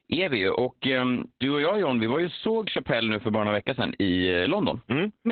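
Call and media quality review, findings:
Muffled, hoarse, slightly robotic speech, whole clip, nothing above 4.4 kHz. Opus voice compression: narrowband SILK with coarse excitation coding, consistent with a bitrate near 8 kbps.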